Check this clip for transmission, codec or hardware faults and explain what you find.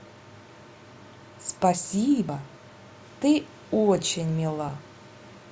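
One fault, a dropped buffer (overrun) at 2.29 s. The likely cause is the capture software falling behind, so the hardware overwrote a block of samples before it was collected. Roughly 50 ms of speech vanishes, heard as the sound jumping abruptly forward.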